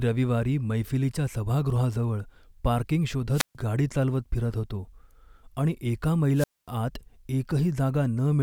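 At 3.32 s, just after "मैफिलीच्या सभागृहाजवळ पार्किंग", a wireless microphone squelch dropout occurs: the radio link fades, hiss rises, then the receiver's squelch mutes the output for about 138 ms before "गाडी चालवत फिरत होतो" resumes at 3.55 s. A second, longer one follows "आणि एका" from 6.34 to 6.68 s, with a 240 ms mute. The rising static before each hole distinguishes this from a digital dropout, which cuts abruptly to silence.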